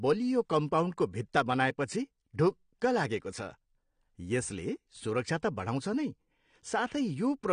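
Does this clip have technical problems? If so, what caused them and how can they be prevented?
Yes. Throughout, the speech likely passed through AAC compression at a low bitrate, around 32 kbps, so nothing survives above 9.8 kHz and sibilants sound smeared and fizzy. Prevent this by encoding at a higher bitrate.

From 5.85 s to 7.53 s, sample clock jitter of roughly 2 microseconds mistimes the converter's sampling, adding a rough hiss about 40 dB below the speech that grows on loud, bright sounds. Prevent this with a stable, low-jitter clock source.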